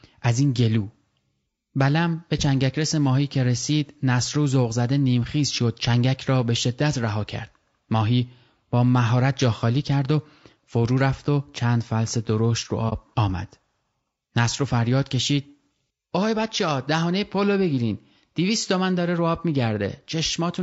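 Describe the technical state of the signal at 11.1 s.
At 11.1 s the speech, like the whole clip, sounds rough and grainy, with noise between harmonics; likely low-delay AAC compression, whose low 32 kbps rate fits this damage.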